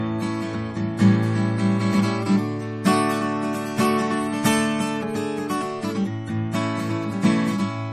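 A piece of music that has passed through two generations of lossy coding and also carries a steady train of tiny ticks. Nothing is present above about 14.1 kHz, and this cut-off and the leftover coding artefacts fit a very low-bitrate MP3, around 40 kbit/s, later saved as a 320 kbit/s MP3. This is likely a case of low-bitrate audio saved at a high bitrate. What separates it from an honest high-bitrate encode is that the large file still carries the first codec's hard ceiling and artefacts, which the second pass could not undo. Running from 0.1 s to the end are clock slip clicks: faint, evenly spaced ticks about ten times a second, clearest on loud, bright, sustained passages. They likely come from two unsynchronised clocks disagreeing by a few hundred parts per million, so a single sample is dropped or repeated each time the error adds up to one sample. Their rigid regularity, tied to the clock error rather than to the music, sets them apart from dropouts or codec glitches, which fall irregularly.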